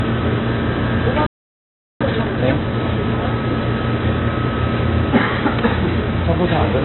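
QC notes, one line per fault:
throughout, MP3 compression: a likely low-bitrate encode, fitting about 24 kbps, cuts the treble and flickers weak frequency lines, so the sound is dull, watery and swirly.
1.26–2.01 s, playback stall: the player likely ran short of data or was blocked, so output drops to silence for about 0.74 s mid-flow before resuming.
2.01–2.75 s, time-compressed catch-up: the player trims its backlog by cutting and cross-fading small pieces, so the sound runs at double speed, normal pitch.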